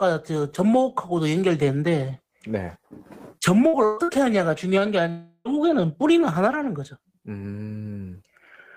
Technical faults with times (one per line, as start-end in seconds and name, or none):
3.67-4.11 burst of packet loss
5.10-5.60 long network dropout